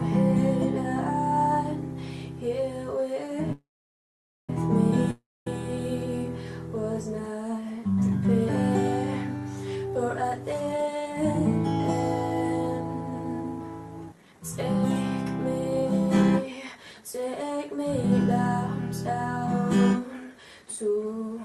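At 3.52 s the sound stops moving forward. The last bit gets stretched into a buzzy tail that dies away, and most of the gap, about 0.84 s, is silence. Normal sound comes back at 4.50 s, right where it left off. That's a call audio freeze, likely from packets held up in transit, so the jitter buffer ran dry and the receiver papered over the wait. Nothing's missing, but everything after it now lands about 0.96 s later.

Shortly after, at 5.11 s, the same fading-buzz-into-quiet thing happens, with about 0.22 s of it silent, and sound resumes at 5.47 s. This time it picks up further along. Roughly 0.36 s never got played, so there's a jump. That's a long network dropout, likely a stretch where no packets arrived at all. The filler just covers the hole, and the lost bit stays lost.

Then come four jitter buffer speed-ups. The receiver had banked more audio than it wanted, so it snipped out tiny pitch-period-sized slices over and over to catch up. 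Pitch holds steady but pace jumps. From 9.86 to 11.43 s and from 14.06 to 14.75 s it runs at 126%, plainly rushed, trimming something like 0.4 s and 0.2 s. From 16.72 to 18.26 s (108%) and 19.47 to 21.38 s (107%) it's milder but still hurried, roughly 0.15 s gone each time. The Opus call path under all this shows as a top end stopping around 12 kHz, which fits a bitrate near 40 kbps.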